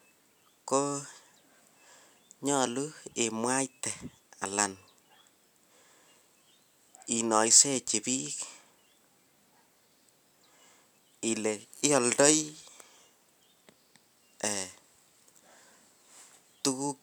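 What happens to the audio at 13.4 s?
Nothing goes wrong at 13.4 s; the speech plays through that moment intact, with no dropout, click or distortion.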